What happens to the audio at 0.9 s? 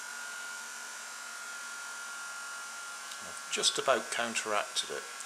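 At 0.9 s the audio falls within a run of clock drift buffer slips spanning 0.48 to 4.78 s: a regular click recurring every 0.72 s. Each click is likely a small block of samples dropped or repeated as two independent clocks, about 1000 ppm apart, drift.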